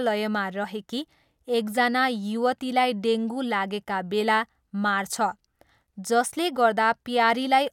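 No audible technical faults detected.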